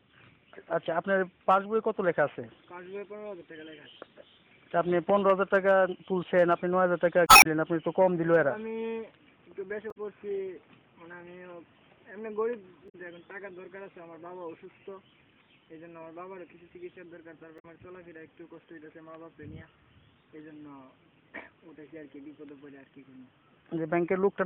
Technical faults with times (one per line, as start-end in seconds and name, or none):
7.25-7.46 damaged data in a compressed stream
9.88-9.97 damaged data in a compressed stream
12.85-12.95 damaged data in a compressed stream
17.56-17.65 damaged data in a compressed stream